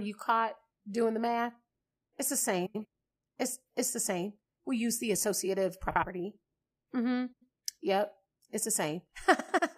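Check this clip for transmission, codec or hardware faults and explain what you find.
Four short stretches of frames out of order occur in this speech. They fall at 2.66–2.85 s, at 5.89–6.04 s just after "use the associative", at 7.32–7.45 s, and at 9.39–9.59 s. In each, two adjacent runs of codec frames were decoded in swapped order. The runs are about 93 ms each, or about 70 ms in the second event. The halves play exchanged, giving a garbled flutter. No time is lost.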